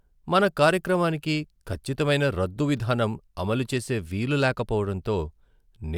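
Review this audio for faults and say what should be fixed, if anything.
No faults; nothing needs fixing.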